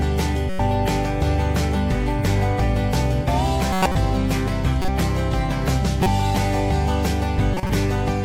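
At 0.50–0.60 s, 3.73–3.96 s, 4.82–4.88 s, 6.03–6.07 s and 7.54–7.70 s, corrupt frames are decoded: damaged compressed data misplaces energy in frequency, producing brief chirps and noise bursts peaking around -10 dBFS, each spanning one to several frames.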